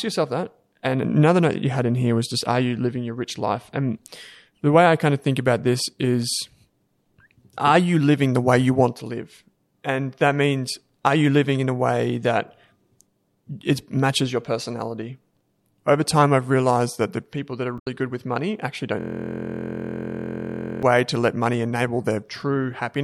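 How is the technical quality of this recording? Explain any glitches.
The speech has two distinct technical faults in its last few seconds.

From 17.75 to 17.87 s, between "the people that are" and "good with money actually", there is damaged data in a compressed stream. Corrupt bytes made the decoder misread frames, lose sync and hunt for the next valid frame header. The result is a brief disruption while the decoder regains sync.

From 19.0 to 20.8 s, after "good with money actually" and before "to let money", a system hang loop takes over. The system stalled while the audio hardware kept replaying the same ring buffer. A 23.22 ms slice repeats dozens of times, which fits a 1024-sample buffer. Looping at about 43.1 Hz, it sounds like a steady, pitched buzz. A decoder glitch passes in a split second, but this is an exact, identical repetition sustained for nearly two seconds.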